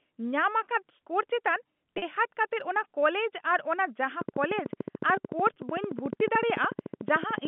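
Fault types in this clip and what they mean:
Packet loss with pitch repetition: Audio went missing for 40 ms at about 1.98 s and 20 ms at 5.54 s. The receiver covered each gap by repeating the last pitch period, so both spots sound like a brief, slightly buzzy held tone.
Train of clicks: From about 4.2 s to the end there's a steady ticking at 13.6 clicks per second, roughly fifty in all, each peaking about 10 dB above the signal. It's likely interference from nearby gear or a faulty connection or power supply.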